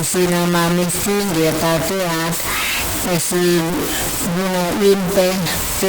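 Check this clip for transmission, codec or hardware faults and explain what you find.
One fault runs through the whole speech clip. Throughout, the sound is coarse and grainy, with distortion that tracks every syllable and quiet tails that sputter or cut to silence. This is likely low bit depth without dither: about 3 bits, truncated, leaving error nearly as loud as the speech.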